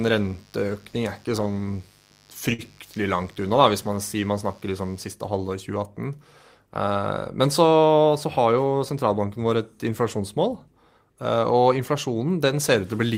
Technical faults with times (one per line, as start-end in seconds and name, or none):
0.00-5.10 mains buzz
2.53-2.62 short stall from a late packet